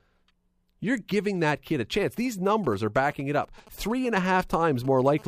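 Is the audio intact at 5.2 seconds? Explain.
No. From 5.18 to 5.23 s there is GSM phone buzz. A nearby 2G handset on a call transmits radio bursts about 217 times per second, and the audio circuitry rectifies those pulses into the signal. The result is a hard, raspy buzz at 217 Hz with a dense stack of harmonics, about 22 dB below the speech. Mains hum sits at 50 or 60 Hz and is smooth, whereas this buzz is harsh and its rate matches neither mains frequency.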